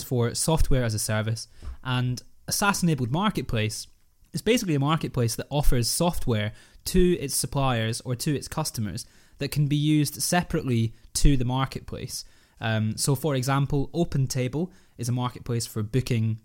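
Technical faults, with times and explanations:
No technical faults can be heard in this speech.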